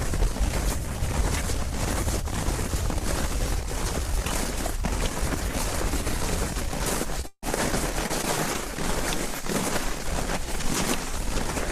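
At 7.21 to 7.25 s comes the first short concealed packet loss: about 20 ms of audio never arrived, and the receiver bridged it by extending the preceding sound before blending back. It registers as a brief smear or wobble. On a spectrogram the harmonics or noise texture run unnaturally smooth and repetitive across that strip. The waveform shows a small periodic patch where the natural detail should be.

Almost immediately, from 7.27 to 7.44 s, a burst of packet loss removes about 160 ms. The receiver carried the last sound forward and progressively turned it down, so what comes through is a held buzz or hiss that fades out, with roughly 50 ms of near silence before the audio picks up further along, the intervening material simply gone. A spectrogram shows frozen, repeated spectral bands thinning into a gap, then an abrupt resumption. In the waveform the envelope decays smoothly to a flat line before jumping back.

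Three more short concealed packet losses follow at 8.06 to 8.11 s, 8.21 to 8.25 s and 8.53 to 8.56 s, each replacing 20 to 40 ms. Each is heard as a brief wobble or blur, and a quick transient at those points can vanish. On a spectrogram they appear as narrow strips of copied, over-regular texture. The waveform shows short repetitive segments with soft joins on either side.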